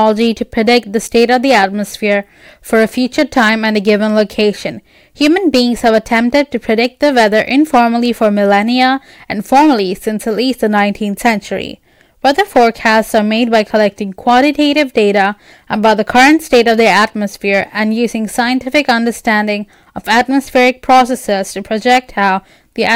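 A speech recording with hard clipping throughout: the signal is driven about 11 dB past what the stage can pass, so a few percent of samples have their peaks sliced flat. Those squared tops add high harmonics, heard as crackle and a harsh fuzz on louder syllables.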